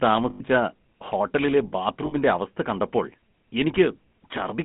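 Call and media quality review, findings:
GSM full-rate codec, whole clip. Buzzy, gravelly roughness on the speech, band limited to roughly 150 Hz to 3.4 kHz. Codec stage: vocal-tract model excited by a sparse regular pulse train, so fine excitation detail is discarded. Damage plainly audible. Coarse texture fits a 13 kbps full-rate encode.

Lost GSM frames, 0.30 to 0.41 s and 2.06 to 2.15 s. Brief rough, metallic ringing holds the sound, about 100 ms and 60 ms respectively. Decoder concealment: last good frame parameters repeated. Gap lengths fit about five and three 20 ms frames.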